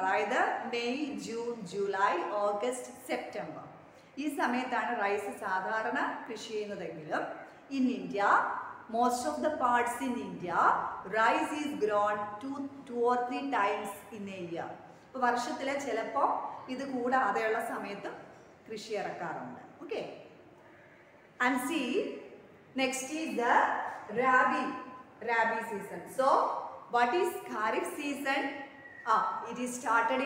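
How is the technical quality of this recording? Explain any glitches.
The technical quality of this recording is good, with no glitches to explain.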